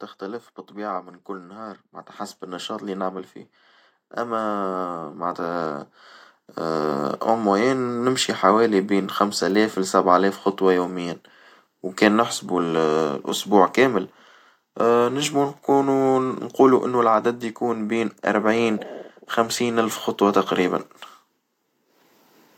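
From 0.19 s to 8.29 s, automatic gain rising is at work: the gain control judged the incoming level too low and kept turning itself up, adding about 14 dB over those eight seconds. Because it acts on the whole signal, the voice and the background beneath it grow louder together, so the recording seems to drift steadily closer and fuller, with the background climbing in step rather than staying put.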